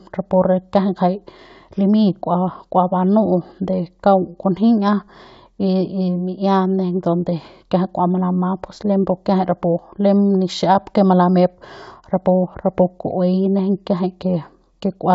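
Nothing technically wrong turns up in this speech clip, which sits comfortably within G.722 wideband telephone coding at 64 kbit/s, where any coding damage is faint at most.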